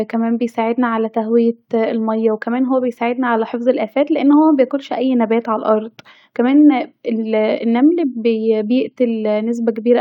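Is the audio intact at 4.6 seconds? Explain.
Yes, the speech at 4.6 seconds plays through intact, with no dropout, click or distortion at that moment.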